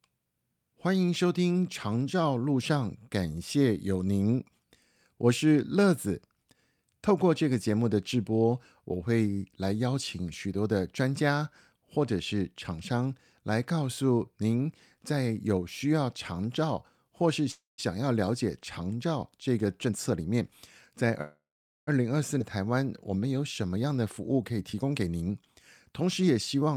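A speech recording with two call audio freezes, a skip ahead, and two jitter buffer speed-ups. From 17.51 to 17.80 s the sound stops moving forward and the last sound is continued as a fading buzz for about 0.27 s, the final 0.16 s of it silent. The same happens from 21.21 to 21.89 s, filling about 0.66 s, of which 0.45 s is silence. In both cases the speech resumes exactly where it stopped, so nothing is lost; the pause is simply inserted. That pattern is typical of packets being held up in transit until the jitter buffer ran dry, which is the likely cause here. Each freeze adds its length to the playback delay. At 22.39 s the opposite occurs: a skip ahead, where roughly a fifth of a second of speech is dropped while later audio was already queued, and the two sides are butted together with only a 7 ms fill, trimming the accumulated delay by about that amount. The jitter buffer speed-up episodes are the receiver draining excess queued audio by cutting out short pitch-period slices in succession. 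From 19.58 to 20.42 s the speech runs at about 120% speed and sounds noticeably hurried. From 23.69 to 26.69 s it runs at about 108%, a milder rush. Each episode removes roughly 0.2 s, and the pitch stays the same in both.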